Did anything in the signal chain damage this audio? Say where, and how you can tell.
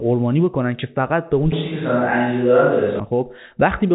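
Yes. Between 1.52 and 3.00 s the sound turns roomy and hollow, with thinner low end and room noise rising to roughly 25 dB under the speech, though the level barely changes. The onset and return are abrupt, which points to the capture stage: likely a switch to a distant microphone after the close one dropped out. The extra reverberation and noise sit inside the telephone band, which stops near 3.8 kHz as expected for G.711 mu-law.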